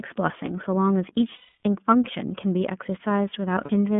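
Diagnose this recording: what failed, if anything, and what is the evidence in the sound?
The whole speech clip passed through the iLBC codec, a narrowband stage. A spectrogram shows a hard band from about 150 Hz to 3.5 kHz with nothing above. The plainly rough, synthetic texture fits iLBC's 13.33 kbps, 30 ms frame mode, with each frame's excitation coded independently.

Lost iLBC frames occur in the network stage at 1.34 to 1.66 s (300 ms, consistent with ten 30 ms frames) and at 3.63 to 3.70 s (60 ms). The decoder repeats the last pitch cycle with added noise, producing a held, buzzy vowel that fades over the longer loss, and the voice returns almost at once afterward.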